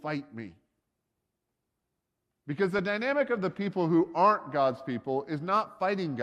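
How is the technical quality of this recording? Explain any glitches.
The recording has one audible glitch, a brief burst of DAB burbling at about 2.79 s. It comes from weak reception: bit errors, at a low rate of roughly a tenth of a percent, slip past the error correction into the MP2 audio data. Corrupted samples put short blips of noise in single sub-bands, and corrupted scale factors make sub-bands jump in level for up to a frame. The result is a short burst of noisy blips laid over the speech, consistent with a handful of damaged frames.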